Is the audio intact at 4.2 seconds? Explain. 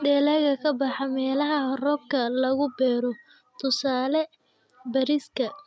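Yes, the speech at 4.2 seconds is intact, with nothing there beyond the expected band limit of the call microphone processing, which keeps the sound below 8 kHz and trims the lowest bass.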